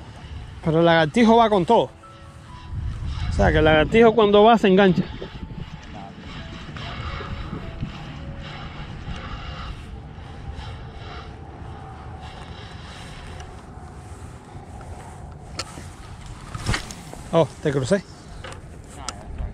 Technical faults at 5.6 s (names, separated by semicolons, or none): none